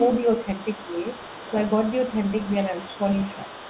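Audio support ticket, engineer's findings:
Other side's voice leaking through, 0.0 to 3.7 s, entire clip. Faint second voice, roughly 20 dB under the talker. Likely cause: residual echo, where far-end loudspeaker playback reaches the mic and the echo canceller doesn't fully subtract it. Spectrogram: weak, separate harmonic traces under and between the main speech bands. Waveform: low-level activity in the talker's pauses. Bandwidth ends near 4 kHz, consistent with a G.711-type narrowband call path.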